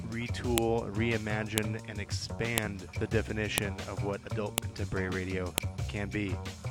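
There's a sharp snap at 0.58, 1.58, 2.58, 3.58, 4.58 and 5.58 s, one per second: file header played as audio, with each one-second piece's header bytes playing as samples.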